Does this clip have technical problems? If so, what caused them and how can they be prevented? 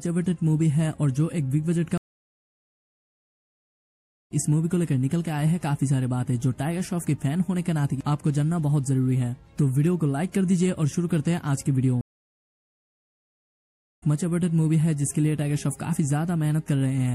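Yes. Throughout the clip the sound has a watery, swirling quality, with dulled treble, metallic chirps on sharp high-frequency sounds and smeared attacks. The likely cause is MP3 compression at a low bitrate, around 64 kbps by the sound of it. The encoder runs short of bits, cuts the treble at a fixed frequency and drops weak frequency components that then flicker on and off between frames. Encoding at a higher bitrate, or with a more efficient codec, would prevent this.

There are two stream reconnects. The audio goes silent from 1.98 s to 4.32 s, about 2.3 s, and resumes roughly a second and a half further on. It drops out again from 12.01 s to 14.03 s, about 2 s, and comes back roughly a second later. Each time the connection broke, the player reconnected and a fresh decoder joined the live stream at a later point, so the missing stretch is skipped. A more stable network connection and a larger client-side buffer would prevent these gaps.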